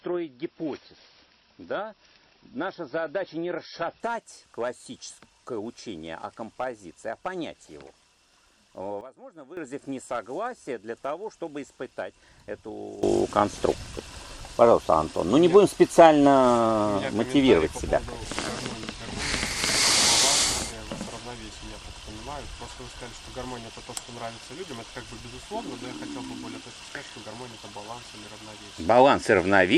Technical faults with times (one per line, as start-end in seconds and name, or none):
0.00-4.00 adaptive stream starting at a low bitrate
9.01-9.57 sudden gain jump
13.03-29.78 sudden gain jump